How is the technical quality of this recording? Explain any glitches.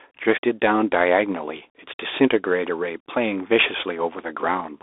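Technical quality is poor. Throughout, a Bluetooth CVSD headset codec narrows the speech to roughly 300 Hz to 3.6 kHz, and nothing passes above 3.8 kHz. Each sample is coded as one up-or-down step, which fits a 64 kbps CVSD link. Loud passages outrun the step size and distort. S sounds turn scratchy, and a granular hiss sits underneath.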